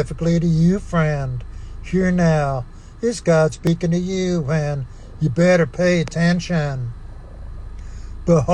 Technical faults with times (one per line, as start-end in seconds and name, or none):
3.49-3.67 compressed frames skipped